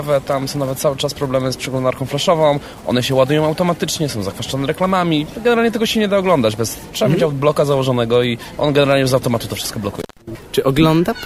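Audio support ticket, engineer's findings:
Dropout with crackle at both edges, 9.99 to 10.22 s; signal gone for about 120 ms, faint hiss underneath. Intermittent contact, probable loose cable or plug briefly opening the line, then remaking with scratchy crackle as the connection recovers.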